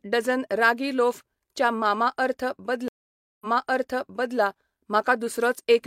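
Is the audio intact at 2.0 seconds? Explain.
Yes, at 2.0 seconds the speech plays through intact, with no fault at that moment.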